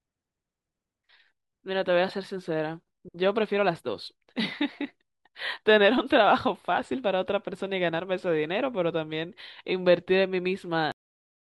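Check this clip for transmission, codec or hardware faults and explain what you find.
One fault, at the very end of the speech.

Cut-off end at 10.92 s: the final buffers were never written, so sound stops abruptly mid-stream and falls straight to digital silence with no decay.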